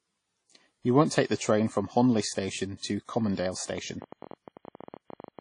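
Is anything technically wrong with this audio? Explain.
Yes. Throughout, the audio shows WMA compression, likely from an early WMA encoder at a low bitrate, consistent with about 32 kbps. The codec quantises long transform blocks coarsely and discards weak components, so the speech sounds plainly washy and ringing, with hiss that breathes with it and nothing above 10.1 kHz.

From 3.69 s to 5.40 s there is a train of clicks, likely from electrical interference or a faulty connection or power supply injecting repeated pulses. Roughly thirty similar clicks arrive at an irregular pace, averaging about 15 per second, each about as loud as the speech, heard as ticking over it.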